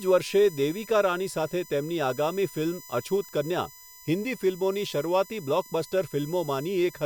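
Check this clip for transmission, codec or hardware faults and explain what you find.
One hardware fault runs through the whole clip: USB whine. Current drawn in the bus's 1 ms frames is leaking into the audio through power or ground, producing a fixed-pitch whine at 1 kHz, loudest at its 12 kHz harmonic, roughly 20 dB below the speech.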